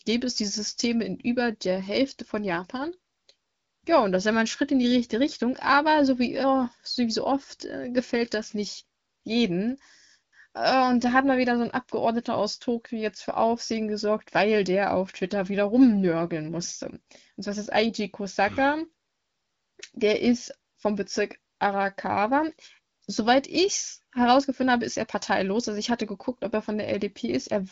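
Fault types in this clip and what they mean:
No technical faults are present in this speech recording, which carries the band-limited, lightly coded character of an AMR wideband (HD Voice) link at a mid-to-high rate, consistent with about 15.85 kbit/s, with nothing above 7.5 kHz.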